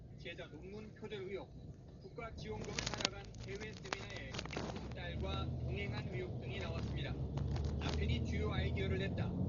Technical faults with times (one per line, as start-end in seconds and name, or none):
0.00-9.49 Dolby Digital compression